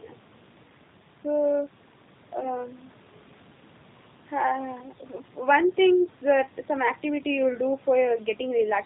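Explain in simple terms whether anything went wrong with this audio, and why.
The whole recording, from start to finish, has passed through the G.729 codec, a phone-call compression scheme. It rebuilds the speech from a simplified model of the voice and discards everything above 4 kHz, so the speech sounds dull, slightly rough and noticeably synthetic.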